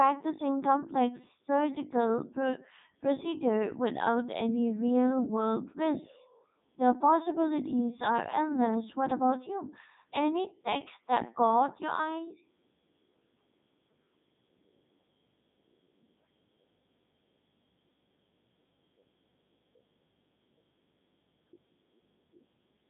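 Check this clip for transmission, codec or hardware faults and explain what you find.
The clip shows one codec fault, present from start to finish.

Codec 2 vocoder, throughout: only pitch, voicing, energy and a spectral envelope survive, and the decoder rebuilds the speech from sine waves rather than the original waveform. The heavy damage sounds robotic and buzzy, with nothing above 3.8 kHz, which fits the 3.2 kbit/s mode.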